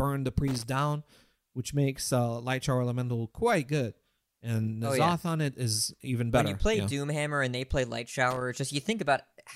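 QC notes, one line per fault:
0.48–0.63 s and 8.30–8.41 s, loose connector crackle: two brief, irregular bursts of scratchy crackle. A worn or dirty contact is rapidly making and breaking, chopping the signal on and off.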